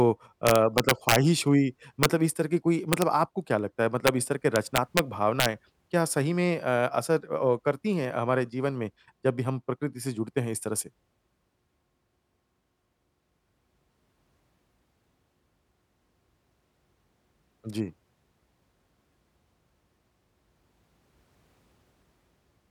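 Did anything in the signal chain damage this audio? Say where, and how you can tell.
Yes. Integer overflow in a fixed-point gain or sample-format stage: violent cracks at 0.47–1.16, 2.03–2.05, 2.93–3.02, 4.07, 4.56–4.99 and 5.40–5.46 s. Peaks only about 1 to 3 dB over full scale wrap to the opposite sign instead of flattening, which is far harsher than clipping.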